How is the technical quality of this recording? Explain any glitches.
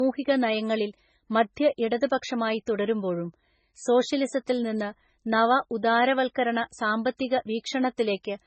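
The technical quality is poor, and the damage runs through the whole recording. The speech has no content above about 8.3 kHz. It carries two layers of coding artefacts, heard together. This is likely transcoding between lossy codecs. The audio seems to have been squeezed hard once, in a way that fits a very low-rate MP3, and then re-encoded as AAC. The second codec spent its bits preserving the first codec's damage and added its own. The lower band limit from the earlier stage remains.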